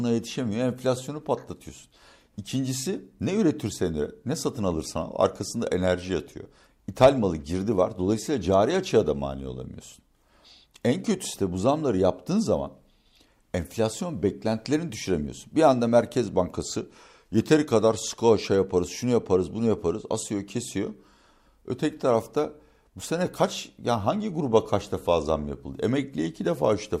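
No technical faults can be heard at any point in the speech, and the signal stays steady and intact throughout.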